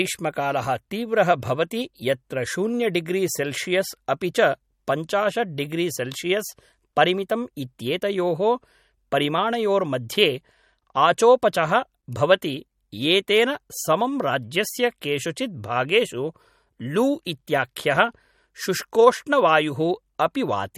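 From start to end the speech carries plainly audible MP3 compression, likely from a bitrate around 48 kbps. Weak frequency lines flicker between frames, giving a watery swirl and chirpy s sounds. Unlike a plain low-pass filter, the cut above 17.7 kHz comes with this shifting texture.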